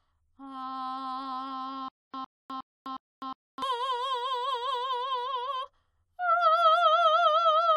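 From 1.88 to 3.62 s the music shows a stutter with silent gaps, likely from the player or stream stalling and replaying its last fragment at each retry. A 107 ms burst repeats four times, every 361 ms, separated by 254 ms of dead silence, and the music meant for that span is lost.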